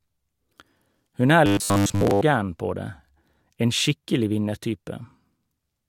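From 1.46 to 2.21 s, robotic sound, likely from repeated 10 ms buffers: metallic 100 Hz buzz; waveform cycles repeat, spectrogram shows flat harmonics.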